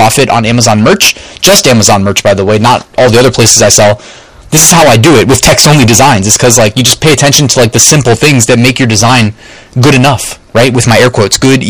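Hard clipping runs from start to finish of this speech clip. The level is driven about 27 dB past what a stage can pass, so roughly a third of the samples hit the ceiling and are cut flat. Every loud syllable turns into a harsh, buzzing fuzz rather than occasional crackle. On a waveform the envelope is a solid slab with squared-off tops. A spectrogram shows dense harmonic smearing reaching far up into the high kHz range.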